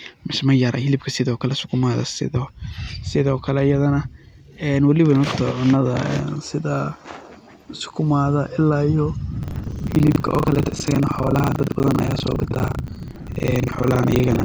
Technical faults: buffer tearing

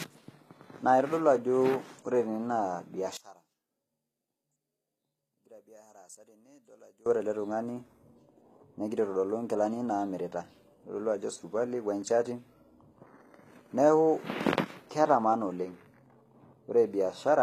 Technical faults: HE-AAC compression; one channel inverted

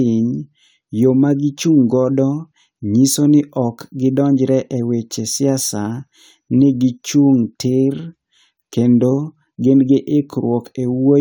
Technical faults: none

